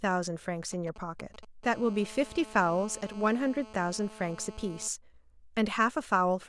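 From 0.73 s to 1.45 s, GSM signalling bursts break through under the speech: a nearby 2G phone exchanging short control transmissions, rectified by the audio circuit into a galloping dit-dit-dit of brief 217 Hz buzzes, roughly 20 dB down. The broken, clustered rhythm sets this apart from a call.

Then, from 1.63 s to 4.88 s, GSM phone buzz takes over as the phone enters a call and transmits continuously in bursts 217 times a second. The result is a steady, raspy 217 Hz buzz full of harmonics, about 20 dB below the speech, unbroken rather than galloping.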